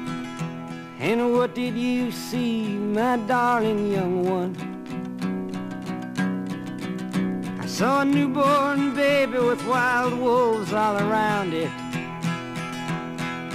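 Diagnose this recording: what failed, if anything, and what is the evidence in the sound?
No failure is evident at any stage of the chain, and nothing in the sound points to a fault.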